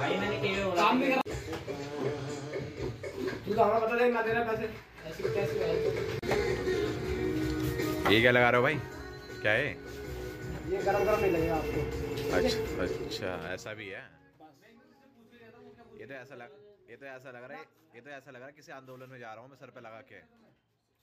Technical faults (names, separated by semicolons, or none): zipper noise